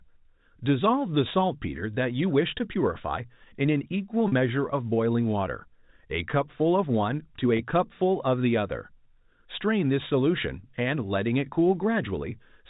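Packet loss with pitch repetition occurs at 4.28 to 4.32 s and again at 7.57 to 7.59 s. The receiver filled 40 ms and 20 ms of missing speech by looping the last pitch period, so each gap sounds like a brief, buzzy held tone.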